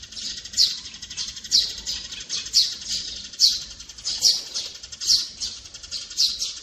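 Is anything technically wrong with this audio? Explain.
Yes. Generation loss runs through the whole clip. The likely cause is the audio being decoded and re-encoded as MP3 around seven times, with the texture pointing to something like 64 kbit/s. Each pass requantises the signal on a shifted frame grid, so the errors and spectral gaps pile up instead of staying fixed. The result sounds swirly, smeared and hollow, transients lose their edge, and nothing remains above 15.1 kHz.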